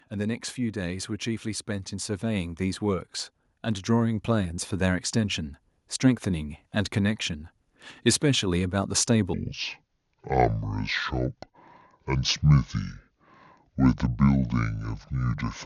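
Speech, with two faults. From 0.09 to 3.09 s, automatic gain rising lifts the level by about 5 dB. The voice and the background swell together, slowly, as the gain control reacts to a quiet input. From 9.34 s to the end, a section at the wrong speed plays at 0.6 times its recorded rate. The voice turns slow and deep, roughly ten semitones lower. It was likely played against the wrong clock.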